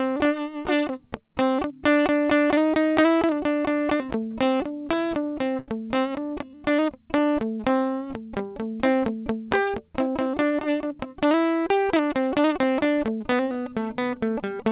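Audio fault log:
4.09–5.68 s, repeated stalls (stutter): The music halts ten times in quick succession. Packets arrived late, so the buffer kept running dry. Each gap was bridged by stretching the last sound, about 159 ms in total, the longest 76 ms. Nothing is lost, but the playback drags and stutters.
6.29–7.78 s, jitter buffer slow-down: The music runs at about 93% speed while keeping its pitch. The receiver was rebuilding its reserve by repeating single pitch periods many times over. That added about 115 ms, so sounds are drawn out and the tempo sags.
9.71–11.32 s, jitter buffer speed-up: The music runs at about 108% speed at the same pitch. The buffer held too much audio, so the receiver trimmed tiny slices of one or a few pitch periods, roughly 150 ms in all. The tempo hurries and loses steadiness.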